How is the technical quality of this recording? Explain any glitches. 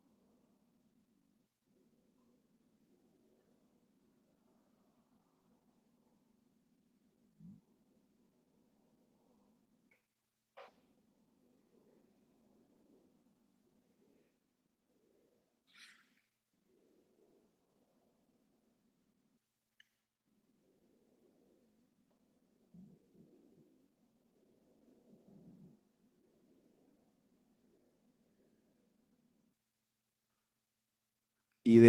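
The quality's held back by one problem that runs the whole way through: Opus voice compression, and the damage is plainly audible. The speech has that muffled, slightly hoarse, faintly robotic edge you get when the encoder is starved of bits and codes the excitation coarsely. It sounds like a low-rate hybrid setup, SILK for the body with a thin CELT layer up top, which fits something around 16 kbps.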